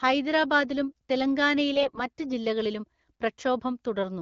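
From 1.74 to 2.04 s the speech turns hoarse, scratchy and gargly while keeping roughly its pitch and loudness. These are AMR bit errors: over about 0.3 s, roughly one in ten of the weakly protected bits in each frame arrived flipped. The checksum on the key bits still passed, so the wideband decoder played the frames and misplaced excitation pulses and skewed gain and spectral detail. Because audio continues without gaps or muting, this differs from dropped frames.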